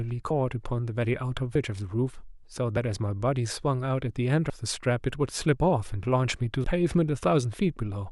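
Speech with compressed frames skipped: whole 32 ms frames never reach the output, so at 0.30, 1.55, 4.50 and 6.64 s the speech jumps forward, by roughly 30, 150, 150 and 100 ms, which points to one, four, four and three frames lost.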